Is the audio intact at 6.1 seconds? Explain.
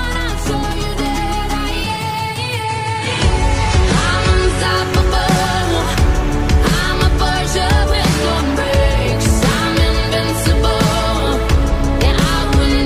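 Yes, at 6.1 seconds the audio is intact, with no dropout, click, distortion or other fault at that moment.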